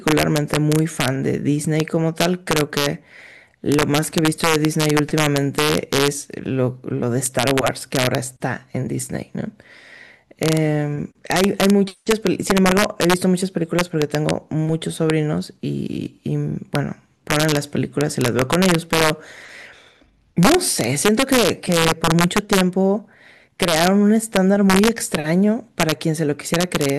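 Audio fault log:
Throughout, integer overflow: the speech is driven about 2 dB past the integer ceiling, and instead of being limited, the loudest peaks wrap to the opposite extreme. Only a small fraction of samples, well under one percent, cross over, so the result is isolated, harsh cracks on loud syllables, sharper than clipping.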